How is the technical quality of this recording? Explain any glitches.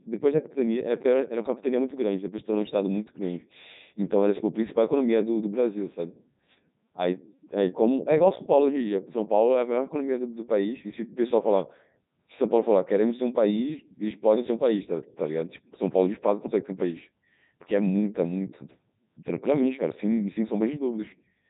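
The quality is poor: the whole clip has passed through the Codec 2 vocoder, so the speech sounds robotic and buzzy throughout. Rather than preserving the waveform, the codec transmits only pitch, voicing, energy and a coarse spectral envelope, and the decoder rebuilds the voice from sine waves. The damage here is heavy, consistent with the 3.2 kbit/s mode. A spectrogram would show nothing above 3.8 kHz and unnaturally regular harmonic stripes, and the waveform would not match the original shape at all.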